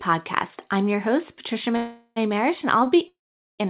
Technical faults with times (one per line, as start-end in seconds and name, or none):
1.76-2.18 call audio freeze
2.84-2.88 short stall from a late packet
3.08-3.61 call audio freeze